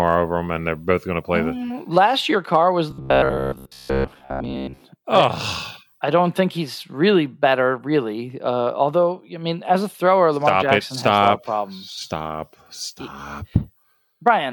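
Hard clipping first hits the speech at 1.98 s and 2.54 s. Peaks overrun a stage by about 1 dB and are cut flat. Each gives a brief crackle.

From 2.91 to 4.81 s the speech turns to a rigid, metallic buzz at 66.8 Hz. It still roughly tracks the speech. The likely cause is robotic sound from repeated short buffers. A chunk of about 15 ms is replayed over and over, and most of the real audio in this stretch is lost.

Clipping returns at 5.15 to 5.24 s, overdriven by about 2 dB. It comes back right after "mean as a thrower", from 10.48 to 11.28 s, also at about 2 dB. It then crackles briefly at 13.56 s and 14.28 s, at about 1 dB.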